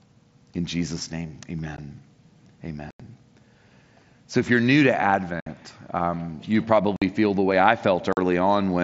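Speech with unconcealed Bluetooth headset packet loss. The sound cuts out abruptly at 1.77 s, 2.91 to 3.00 s, 5.40 to 5.47 s, 6.96 to 7.02 s and 8.13 to 8.17 s. Voice packets were lost on the headset link. Silence or an idle pattern replaced them, with nothing to conceal the gaps.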